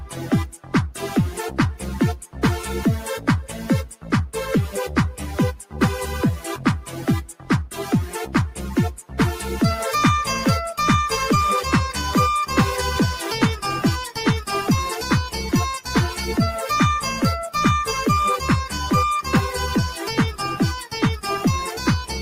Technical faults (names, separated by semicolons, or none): noise suppressor applied to music or sounds; sound cut by the noise suppressor